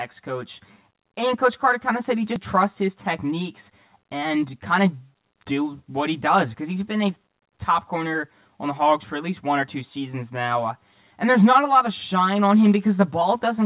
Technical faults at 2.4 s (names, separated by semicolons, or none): channel delay (comb filtering); skip ahead